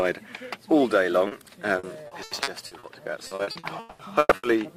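At 1.27 to 1.34 s there is short concealed packet loss. About 40 ms of audio arrived too late to decode. The receiver stretched the preceding sound across the hole, then blended back. It is heard as a brief smear or wobble.

From 1.79 to 2.86 s, repeated packet loss gives a robotic sound. Six holes, the longest 80 ms, are each patched by extending the last sound. About a quarter of the stretch is filled this way, so it turns choppy. From 3.27 to 4.46 s it worsens. Eight holes fill half the span, one lasting 200 ms, and pieces of sound go missing.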